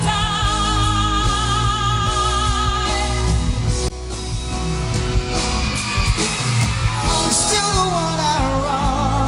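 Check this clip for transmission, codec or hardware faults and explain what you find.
No transmission, codec or hardware faults.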